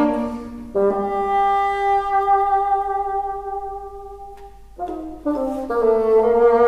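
No technical faults are audible anywhere in the audio.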